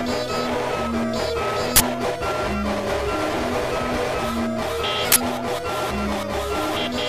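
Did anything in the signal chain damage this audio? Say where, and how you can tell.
Yes. The damage is at the driver or buffer stage: an uninitialised buffer was played twice, at 1.76–1.80 s and again at 5.12–5.16 s. Each event is a sudden, loud burst of digital noise lasting 40 ms, which fits a 40 ms buffer block. The burst has nothing in common with the surrounding sound, which points to leftover memory being sent to the output as samples before the real audio was written into that block.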